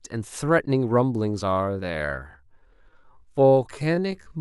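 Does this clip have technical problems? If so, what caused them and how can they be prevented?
Yes. A time-stretched section runs from 1.41 s to the end at 4.41 s. The pace drops abruptly to about 0.62 times the original speed while the pitch stays put. This is likely the work of a stretching algorithm that lengthened the audio by repeating short fragments to fill time without lowering the pitch. Prevention: avoid heavy stretching to fit a length, and trim or re-record instead.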